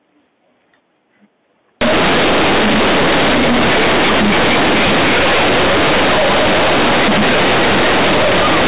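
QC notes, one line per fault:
1.81–8.68 s, companded audio read as linear: A-law bytes are played back as plain 8-bit samples with no expansion. Each sign change therefore swings across about half the range, making the sound loud and buzzy with heavy noise in pauses. The waveform is bent out of shape, and the spectrogram shows a smeared broadband wash.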